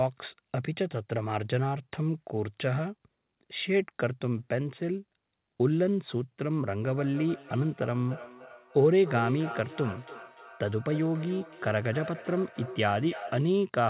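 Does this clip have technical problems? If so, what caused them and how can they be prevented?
Yes. From 6.81 s to 13.6 s there is feedback echo between two devices: each phrase returns at an interval of roughly a third of a second, thinner and more ringing on each pass, peaking at about 13 dB below the direct speech. A second device in the same room plays back what the first microphone sent, and that microphone captures it again; its echo canceller only removes its own playback, so the loop survives. The audio band stops at 4 kHz, which fits a narrowband G.711 codec. To prevent this, mute the microphone and speaker on all but one device in a shared room.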